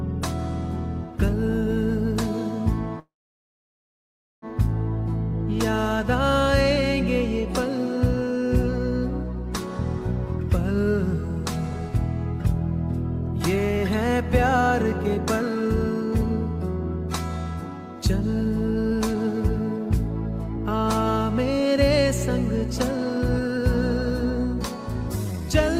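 From 2.99 to 4.45 s there is a call audio freeze: the sound stalls into a brief fading continuation, then about 1.3 s of silence, and resumes where it stopped, likely from an emptied jitter buffer. Unlike a dropout, nothing is lost. Jitter buffer speed-up follows from 13.56 to 21.75 s at 106% speed, trimming roughly half a second, and from 22.97 to 25.76 s at 107%, trimming roughly a fifth of a second. Both sound hurried but keep their pitch, unlike resampling.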